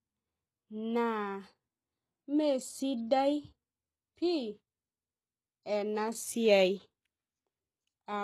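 Throughout the speech, the upper band sounds synthetic, with nothing above 12.3 kHz, and s sounds come out gritty and metallic. This is likely HE-AAC compression rebuilding the treble from copied lower bands, with plainly audible damage that points to roughly 16 kbps.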